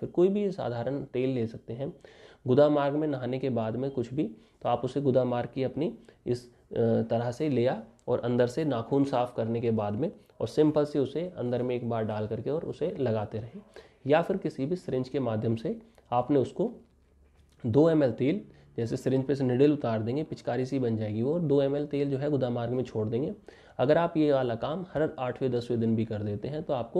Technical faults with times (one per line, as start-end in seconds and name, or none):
none